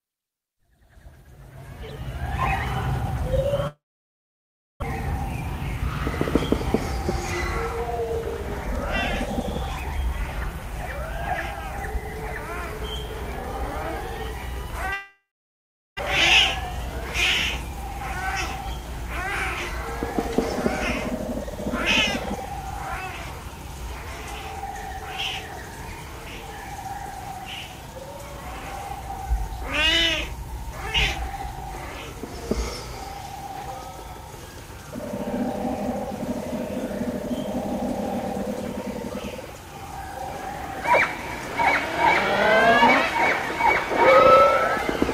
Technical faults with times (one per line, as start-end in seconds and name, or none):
3.67-4.84 long network dropout
14.93-16.01 long network dropout
27.16-28.60 jitter buffer speed-up